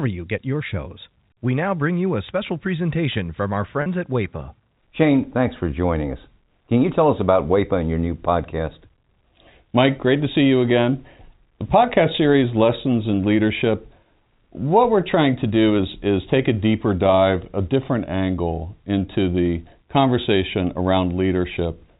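At 3.82 s, just after "special presentation from our", packet loss with pitch repetition leaves a 40 ms gap. The last pitch period repeats, giving a brief buzzy hold.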